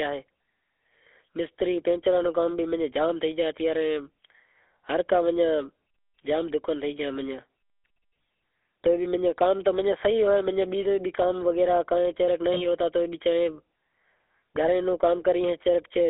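A speech recording passed through the GSM full-rate codec, which models the vocal tract and drives it with sparse, regularly spaced pulses. That sound fits 13 kbps full-rate coding. The damage is plainly audible as a buzzy, gravelly roughness, on a telephone band of about 300 Hz to 3.5 kHz. At 12.54 to 12.66 s, lost GSM frames were filled by repeating the last good frame. The result is a brief rough, metallic ring. Its shortness points to a single missing frame.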